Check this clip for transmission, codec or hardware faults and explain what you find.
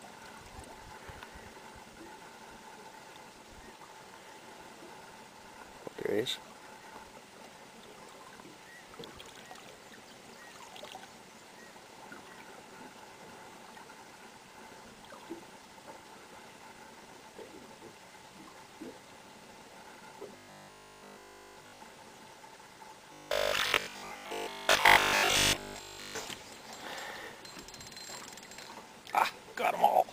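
Two stretches show robotic sound from repeated short buffers, at 20.37 to 21.81 s and 23.13 to 26.27 s. New audio most likely arrived too seldom, so playback kept reusing the last 20 ms segment while the real material was skipped. That loop imposes a steady 50 Hz buzz: the first stretch is almost entirely repeats, the second mostly so, and the sound becomes a rigid metallic drone that only loosely tracks the underlying audio.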